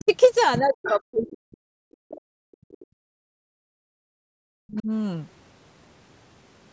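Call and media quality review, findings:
Speech suppressed in double talk: talker's level dips about 20 dB at 0.0–0.11 s, then much deeper (around 40 dB) across 0.59–2.97 s and 4.45–4.89 s. Likely echo canceller attenuating near-end speech during overlap. Unlike gating, the talker's own voice is lost, not just room tone.

Other side's voice leaking through: faint second voice at 0.0–0.16 s, about 25 dB under the talker, and a brief, stronger scrap at 0.85–0.91 s, about 15 dB under. Likely residual loudspeaker echo the canceller failed to subtract. This is an added voice, not a drop in level.

Background gated by the echo canceller: room tone falls about 39 dB from 3.25 to 4.17 s, roughly a second, then recovers. Echo canceller clamping the microphone while the loudspeaker plays. Only the background drops, with no overlapping talker being cut, which separates it from double-talk suppression. 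The call microphone processing band-limits everything to 8 kHz.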